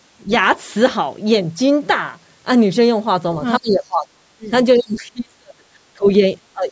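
The speech dips briefly at 0.24 to 0.3 s, then sinks by up to about 30 dB from 3.59 to 4.51 s. A faint second voice slips in at 4.75 to 4.79 s, far below the talker. The talker then drops by as much as about 35 dB from 4.77 to 5.68 s, with shallower cuts of around 20 dB at 5.94 to 6.22 s and from 6.53 s to the end. The dips are likely speech suppressed in double talk: with both sides talking at once, the echo canceller turned the talker down along with the loudspeaker echo. The faint second voice is likely the other side's voice leaking through, echo the canceller did not fully remove from the microphone. Throughout, the call's microphone processing leaves nothing above 8 kHz.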